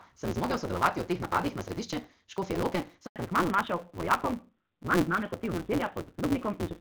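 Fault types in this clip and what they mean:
Block size mismatch (truncated): One stage hands over longer blocks than the next one reads, so the tail of every block gets dropped. Here it runs through the whole clip as a steady buzz at about 172 Hz, which fits a 256-sample read size. The speech also plays 1.88 times too fast, yet stays at roughly its normal pitch, because whole chunks are skipped rather than the audio being sped up.
Handover gap: The call switched networks and no speech frames came through during the changeover. At 3.06 s the speech fades out within a few tens of milliseconds, and it stays silent until 3.16 s. That is only about a tenth of a second of clip time because of the speed-up, but it corresponds to roughly 180 ms of the call, and whatever was said then is gone.
Fallback to narrowband: Right after the handover, from 3.16 s to the end, the call drops from HD Voice to an older narrowband codec. 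Nothing above 4 kHz survives, so the speech turns dull and muffled and picks up a rougher, grainier texture. That points to a low-rate narrowband mode, something like AMR-NB at 7.4 kbit/s, taking over from the much richer wideband stream before it.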